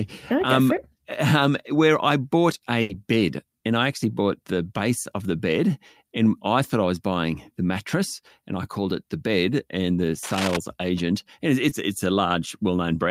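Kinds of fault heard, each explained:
Burst of packet loss: at 2.81 s, after "um where I bought", about 80 ms never arrived in time, so the receiver stretched the last sound and turned it down for a moment, then jumps ahead to "bed and I actually" with a chunk gone.
Cable scratch noise: from 10.23 to 10.59 s, between "the bed and the" and "agent and it's", a rough, uneven scratching rides over the speech at a fairly high level, a few decibels under it, most likely a worn cable or connector being moved.
Short concealed packet loss: around 11.69 to 11.73 s, after "agent and it's", roughly 20 ms went missing and the decoder filled it by continuing the previous sound, leaving a quick smear before "it's a" picks back up.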